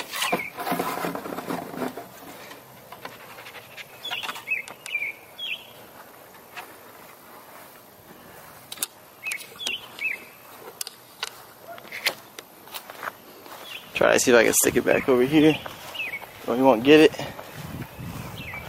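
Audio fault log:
3.9 s: skip ahead. Playback jumps forward with no gap, and roughly a second of audio is missing. The material on either side of the cut is joined almost directly. That stretch was dropped, either in transit or by the jitter buffer discarding it on overflow, while later audio was already queued. The receiver's delay therefore fell by about a second in one step. There is no fill, so the join is abrupt.
3.99–6.13 s: jitter buffer speed-up. For just over two seconds the audio runs at about 111% speed with the pitch unchanged. Because that is well past the point where playback starts to sound rushed, it comes across as hurried. The buffer was holding more than its target depth. To bring the delay down, the receiver repeatedly cut short segments of one or a few pitch periods, removing roughly 0.3 s in total.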